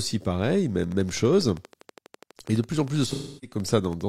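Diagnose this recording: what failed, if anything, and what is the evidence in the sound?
A train of clicks, at the analogue wiring or power stage, runs from 0.84 s to 4.02 s at a steady 12.3 per second, about 40 similar pulses peaking a few decibels above the speech. The regular spacing and the ticking that persists through pauses separate it from codec glitches. Likely cause: interference from nearby equipment, a faulty connection or a faulty power supply.

AAC frame loss with concealment, at the codec and network stage, affects 3.06 s to 3.57 s, with about 0.3 s of audio missing, which fits seven lost frames. The decoder filled the gap from the last good spectrum, with scrambled signs or interpolated energy. Unlike a plain dropout, the gap is not silent.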